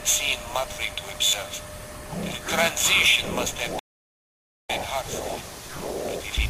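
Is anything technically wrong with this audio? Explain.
Yes. There is a playback stall from 3.79 s to 4.70 s. The player likely ran short of data, or its playback thread was held up, so nothing reached the output for about 0.9 s. The audio cuts off in mid-flow, with a clear gap of silence, and then carries on once the player recovers. The break is long enough to be heard as an interruption rather than a click.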